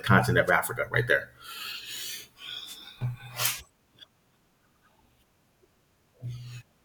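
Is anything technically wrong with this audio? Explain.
Yes, there are two wireless microphone noise hits, at 0.47 to 0.51 s and 2.65 to 2.78 s. The FM radio link fades as reflections cancel the signal, so receiver noise swells up over the speech, giving short swishes of static, the second one longer.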